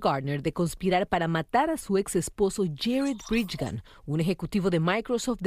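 No technical faults can be heard anywhere in this speech recording. There is nothing in the audio that needs to be flagged or given a time.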